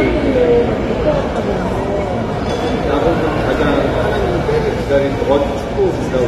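From start to finish the audio sounds dull and smeared, with a warbling, fizzy texture on sustained sound and nothing above 13.5 kHz. This is plainly audible AAC compression, likely AAC-LC at a low bitrate around 32 kbps, quantising coarsely and discarding the upper band.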